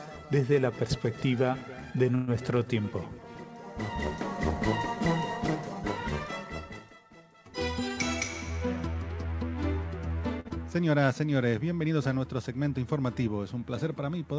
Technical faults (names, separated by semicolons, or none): call audio freeze; jitter buffer speed-up; short stall from a late packet; short concealed packet loss